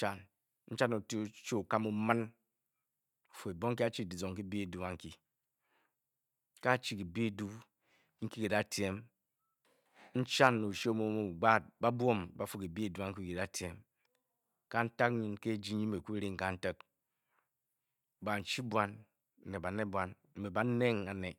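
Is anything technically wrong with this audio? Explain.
No, nothing technical stands out here; the speech comes across just as it should, with nothing getting in the way.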